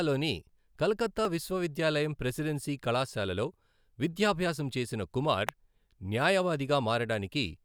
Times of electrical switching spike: 5.49

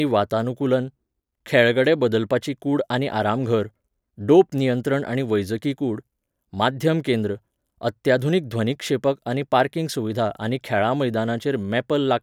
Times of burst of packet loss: none

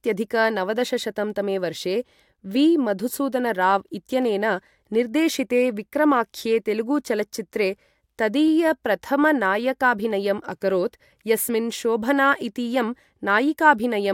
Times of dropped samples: 4.22, 8.48, 10.11

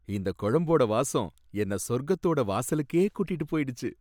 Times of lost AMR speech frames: none

